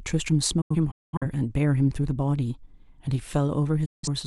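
From 0.61 to 1.26 s the speech breaks up in a digital broadcast dropout: the receiver mutes on bad frames, leaving several short holes with quick 8 ms fades, about 340 ms missing, longest gap 213 ms. At 3.85 to 4.08 s another dropout loses 171 ms.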